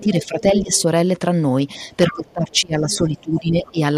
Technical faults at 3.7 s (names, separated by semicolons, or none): hard clipping; speech suppressed in double talk; other side's voice leaking through